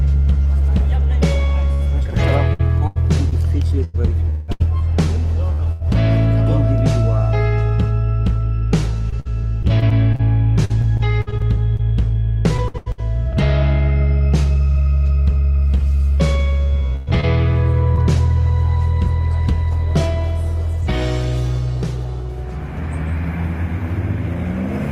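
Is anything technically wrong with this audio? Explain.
Yes. Repeated packet loss (robotic sound) occurs at 1.73–5.82 s, 9.10–13.02 s and 16.96–17.99 s. Packets repeatedly went missing, and each hole, up to 183 ms long, was bridged by extending the preceding sound, so the audio turns choppy and robotic, with pieces dropped out.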